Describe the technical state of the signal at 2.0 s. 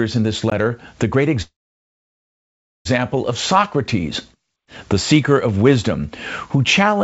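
At 2.0 s the signal is inside a call audio freeze running from 1.42 to 2.87 s. The last sound is briefly carried on as a fading buzz or hiss, then drops to near silence for about 1.34 s. The likely cause is packets stalling in transit until the jitter buffer ran dry. When delivery resumes, the speech picks up where it stopped. Nothing is lost, but everything after is about 1.43 s later.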